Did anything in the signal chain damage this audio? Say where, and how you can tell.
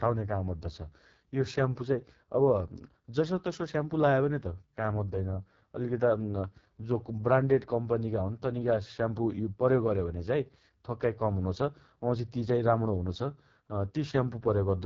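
Yes, at the codec stage: the speech has been through an AMR wideband (HD Voice) codec, heavily damaged throughout. Its rough, raspy texture points to the lowest 6.6 kbit/s mode, where the pulse-excited vocal tract model is starved of bits. On a spectrogram, harmonics turn smeared and grainy, the 6.4 to 7 kHz band holds shaped noise rather than harmonic structure, and energy stops completely near 7.6 kHz.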